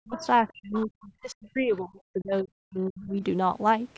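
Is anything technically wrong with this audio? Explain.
Yes. The speech suffers from double-talk suppression, and the far-end voice leaks through in short scraps.

Speech suppressed in double talk occurs from 0.00 to 0.23 s and again from 0.44 to 3.23 s, where around two seconds are affected in total. The level dips by as much as about 40 dB. This is likely an echo canceller that could not tell the talker from loudspeaker echo and so pulled both down. On the waveform the envelope collapses in patches, and the spectrogram shows the speech harmonics fading or breaking off.

The other side's voice leaking through appears at 0.16–0.27 s, 0.48–0.52 s and 0.73–0.86 s. It sits about 15 to 35 dB below the main speech and sounds faint. The likely cause is loudspeaker playback that the echo canceller did not fully remove. A spectrogram shows weak, separate harmonic traces overlapping the main voice.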